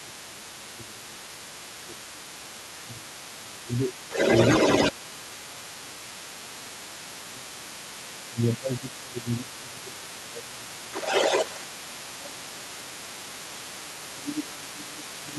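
Other side's voice leaking through runs from 0.0 s to the end: a second voice sits beneath the talker, around 15 dB lower, likely because the device's loudspeaker output reached the microphone and the echo canceller left part of it behind.

Speech suppressed in double talk occurs at 0.03–1.26, 1.85–3.95, 4.91–7.81, 8.28–10.95, 12.01–13.72 and 14.13–15.38 s. The talker dips by around 10 dB, deeper in the third and fifth stretches, likely because the canceller couldn't separate talker from echo and lowered both.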